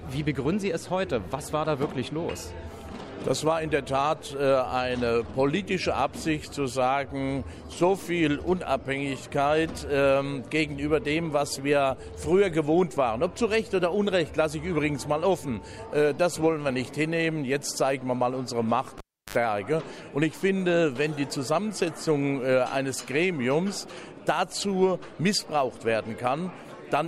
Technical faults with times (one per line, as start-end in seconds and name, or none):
18.98-19.36 cable pulled and plugged in